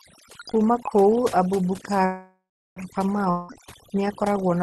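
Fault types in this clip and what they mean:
Overdone noise removal: A noise reduction stage set far too aggressively cuts individual frequency bands down or out wherever they sit close to its noise estimate, taking soft parts of the speech too. Throughout, the background drops and breaks up into twinkling specks.
Call audio freeze: Delayed packets likely left the jitter buffer empty, so from 2.05 to 2.79 s the receiver stretches the last sound into a fading buzz, with roughly the final 0.35 s silent. The speech then resumes where it stopped, delayed by about 0.71 s, with nothing lost.
Long network dropout: From 3.30 to 3.54 s no audio arrived, likely from a network outage. The last sound is carried on as a fading buzz for about 0.18 s, and the speech returns further along, with about 0.18 s of it never heard.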